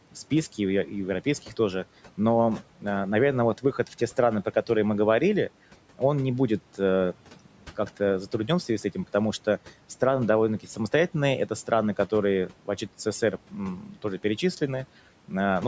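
A speech recording, band-limited at 8 kHz by call microphone processing, with room noise about 22 dB below the voice, has one fault: speech cut by the noise suppressor between 13.8 and 14.04 s. For about 150 ms in total, the suppressor treated speech as background and pulled it down by as much as about 10 dB, so the sound there seems swallowed. On a waveform the envelope dips abruptly, and a spectrogram shows the speech energy thinned.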